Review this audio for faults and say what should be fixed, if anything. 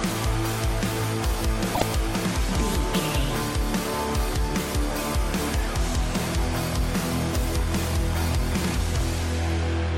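There is damaged data in the compressed stream from 1.71 to 1.82 s. For about 0.11 s the sound is disrupted. Part of the encoded data in that stretch was lost, zeroed or overwritten. The decoder misread those frames and lost its place in the stream. It then had to search for the next valid frame header before clean decoding could resume. To prevent this, check file integrity during transfer and storage, and re-encode from an undamaged source.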